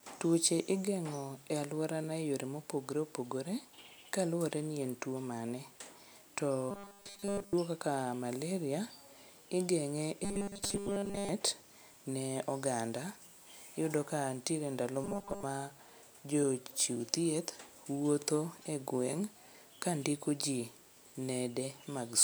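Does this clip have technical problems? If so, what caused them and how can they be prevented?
Yes, there's robotic sound from repeated short buffers at 6.71 to 7.53 s, 10.24 to 11.29 s and 15.04 to 15.43 s. The speech collapses into a stiff metallic buzz at 200 Hz, fully in the first stretch and mostly in the other two. That's likely the playback starving and looping a roughly 5 ms chunk instead of fresh audio. A larger jitter buffer, or letting the output pause on underrun rather than repeat, should prevent it.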